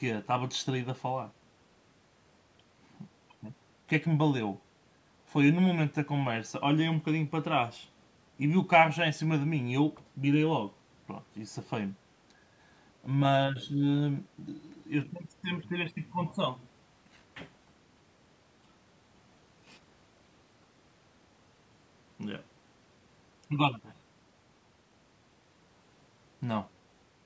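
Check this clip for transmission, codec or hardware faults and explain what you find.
No transmission, codec or hardware faults are audible here.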